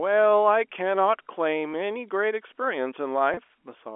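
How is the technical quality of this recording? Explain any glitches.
Two brief glitches occur in the speech, which comes through a telephone band of 300 Hz to 3.4 kHz consistent with G.711 coding. At 1.73 s, and again from 3.34 to 3.37 s, the sound briefly holds on a slightly buzzy, repeated tone. This is packet loss with pitch repetition. About 10 ms and then 30 ms of audio went missing, which fits one and then three 10 ms packets. The receiver covered each gap by repeating the last pitch period.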